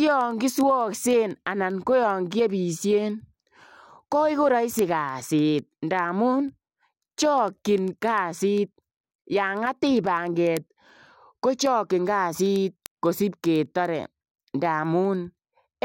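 A speech recording carries sharp, uneven ticks repeating about ten times a second from 0.11 s to the end, roughly 150 in all. These are word clock ticks: the receiving device runs on an unlocked clock about 200 ppm off, so each slip drops or repeats one sample.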